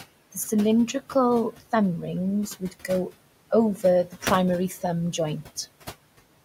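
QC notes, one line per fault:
Throughout: noise suppressor artifacts. The suppressor pulls the room noise, which sits about 17 dB below the speech, down by about 18 dB between phrases, so the background pumps in and out with the speech.
2.6–2.89 s: speech cut by the noise suppressor. Here the suppressor misreads quiet speech energy as noise and attenuates it by up to about 10 dB, for around a tenth of a second in total, so the affected speech sounds swallowed and faint.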